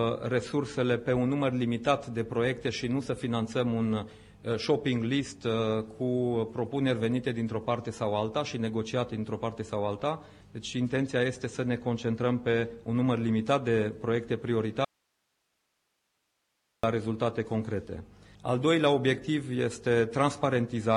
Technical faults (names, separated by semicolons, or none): audio dropout to a faint residue